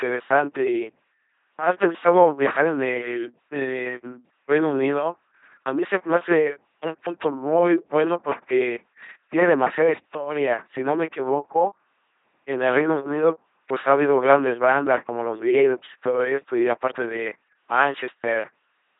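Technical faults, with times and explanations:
throughout: LPC-10 vocoder. Speech is rebuilt from a ten-pole filter fed by buzz or hiss at 2.4 kbit/s. It sounds robotic, with nothing above 3.8 kHz.
17.11 s: block of digital silence. A 5 ms run of samples drops to silence and returns abruptly. This produces a brief tick.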